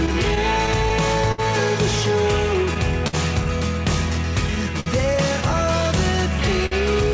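The audio arrives through a WebRTC call path whose band ends at 8 kHz, which fits G.722 at 64 kbps. It carries clock drift between sender and receiver: the sender's clock runs roughly 4 percent slow, so the jitter buffer keeps draining and has to be topped up. That shortfall shows up as small timing hiccups spread unevenly through the clip. There are also four short stalls from a late packet, at 1.32 to 1.40 s, 3.07 to 3.15 s, 4.80 to 4.88 s and 6.66 to 6.73 s. In each one the buffer ran dry and the receiver held the last sound for 63, 55, 58 and 54 ms until the packet arrived. Playback then resumed where it had stopped, so nothing is lost, but each spot has a brief drawn-out sound. The stalls fall roughly every 1.7 to 1.9 s. Earlier, between 0.06 and 0.92 s, there are scattered short gaps, about four lost or late packets patched by continuing the preceding sound. These total around 40 ms, with none much longer than about 10 ms, and they concern only a few percent of that span. 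They come through as ticks and small smears rather than clear dropouts.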